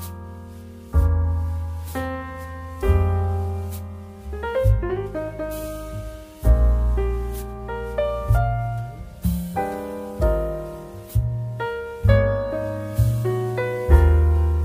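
No technical faults are audible in this recording.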